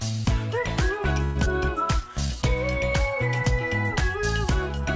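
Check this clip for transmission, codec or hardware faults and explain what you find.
Three network-related faults cluster between 1.2 and 2.3 s, heard through wideband call audio with nothing above 8 kHz.

From 1.24 to 1.37 s there is a call audio freeze, likely from delayed packets draining the jitter buffer. The last sound stretches into a fading buzz for about 114 ms, then resumes where it stopped. On a spectrogram this shows as smeared horizontal bands that decay.

At 1.45 to 1.48 s, short concealed packet loss removes about 40 ms. The receiver bridges the gap with a brief extrapolation, heard as a small smear.

From 1.76 to 2.28 s, a jitter buffer slow-down repeats pitch periods to add 38 ms. The audio plays at 94% speed without a pitch change, so sounds are drawn out. A spectrogram shows harmonics that stay level while being stretched in time.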